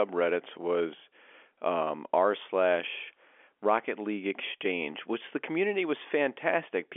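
No technical faults can be heard in the speech, which occupies an ordinary telephone band of roughly 300 Hz to 3.4 kHz with nothing above about 3.6 kHz, consistent with G.711 A-law coding at 64 kbps.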